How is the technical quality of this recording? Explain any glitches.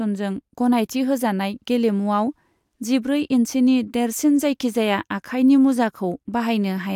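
The technical quality of the recording is good, and there are no glitches to explain.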